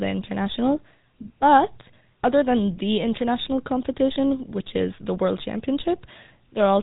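Throughout, the speech carries plainly audible GSM full-rate codec damage: regular-pulse excitation gives a buzzy, gravelly roughness fitting 13 kbps, and a spectrogram shows nothing above 3.8 kHz.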